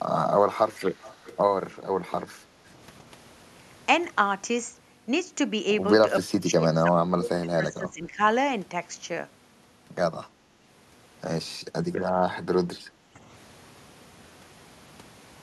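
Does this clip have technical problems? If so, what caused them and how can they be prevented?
Yes. This speech clip has three kinds of echo-canceller trouble.

Echo leak: a faint, delayed copy of the audio trails behind the speech from 0.93 to 1.37 s, and again briefly from 2.05 to 2.09 s, lagging by 326 ms and sitting well below the direct speech. The likely cause is a far end on loudspeaker whose echo canceller let part of the replayed signal through its microphone and sent it back. Using a headset at that end, or giving the canceller a longer tail and better convergence, prevents it.

Background gated by the echo canceller: from 2.38 to 2.7 s the room tone sags by about 7 dB for roughly 300 ms, then comes back. While the loudspeaker was playing, the canceller's suppressor pulled the microphone down hard to hide any residual echo, and the background went with it. A gentler suppressor with comfort-noise fill keeps the room sound steady through those moments.

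Speech suppressed in double talk: the voice dips deeply from 6.27 to 6.94 s and from 7.12 to 8.21 s, and shorter, shallower dips follow at 12.73 to 12.77 s and 13.14 to 13.19 s. This is likely because both sides were talking at once and the canceller, unable to tell the local talker from the loudspeaker echo, attenuated everything. Better double-talk detection, or a headset removing the echo path, prevents it.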